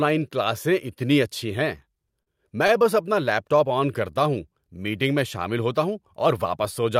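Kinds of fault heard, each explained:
Short stall from a late packet: a packet came late, the jitter buffer ran dry, and the last sound was held until it arrived. Nothing is lost. There is a 40 ms hold at 2.23 s and a 20 ms hold at 2.67 s before "اپنا لیپ". A spectrogram shows briefly frozen harmonic bands, and the waveform shows repeated cycles with a slight dip.
Jitter buffer slow-down: the receiver rebuilt its reserve by repeating single pitch periods many times. From 3.56 to 4.12 s, between "اپنا لیپ" and "ہوں میٹنگ میں شامل", the speech plays at 91% speed, about 57 ms longer, with unchanged pitch. A spectrogram shows stretched formants with the same harmonic spacing, and the waveform shows strings of near-identical cycles.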